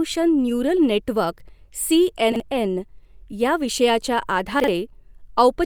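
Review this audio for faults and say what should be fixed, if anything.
Chunks out of order at 2.32–2.40 s, just after "नेटवर्क सी", and at 4.60–4.68 s, just after "या विषयाच्या": each time a 40 ms chunk was delivered one chunk late and played after its successor, so the speech briefly jumbles. Holding incoming chunks in a buffer and reordering them by sequence number before playback would prevent this.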